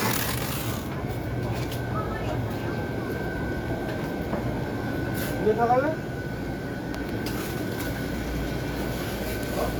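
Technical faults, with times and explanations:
No technical faults can be heard in this recording of sounds. Nothing in it calls for a time or an explanation.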